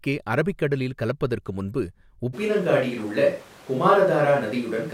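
At 2.35 s, just after "அரபிக் கடலில் கலப்பதற்கு முன்பு", the speech abruptly turns roomy and hollow, with thinner bass. The level stays about the same. Room noise rises to roughly 25 dB below the speech. This is likely a switch to a distant microphone. It continues to the end.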